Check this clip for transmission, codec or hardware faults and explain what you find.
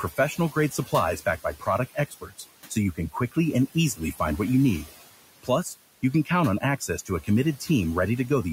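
Two faults, both from the noise suppressor; the room noise sitting about 18 dB under the talker is just the space itself.

Noise suppressor artifacts run the whole clip. The suppressor pulls down the bands it judges to be steady noise by about 16 dB, frame by frame, so the background drops away in the gaps and swells back under speech.

Speech cut by the noise suppressor happens three times, at 0.35 to 0.93 s, 1.89 to 2.44 s just before "so you", and 3.95 to 4.2 s just before "what you need". The suppressor mistook quiet speech for noise and ducked it by about 11, 14 and 12 dB, swallowing a short stretch, roughly a tenth to a fifth of a second each time.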